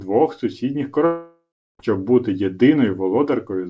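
A speech clip with a long network dropout from 1.06 to 1.81 s. The last sound is stretched into a fading buzz. It then falls to about 0.34 s of silence. Speech resumes with about 0.74 s gone. Lost packets are the likely cause. Nothing is heard above 8 kHz, which fits a G.722 call codec.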